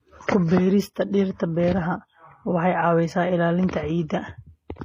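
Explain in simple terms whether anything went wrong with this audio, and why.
Something did go wrong, and it lasts the whole clip. The speech has the layered, smeared quality of transcoding between lossy codecs. It was likely squeezed by an MP3-style encoder first and then again by HE-AAC. Each pass throws away detail and adds its own swirly, watery artefacts, and here both sets are audible together from start to finish. The chain also removed everything above about 14.9 kHz, so the top end sounds dulled.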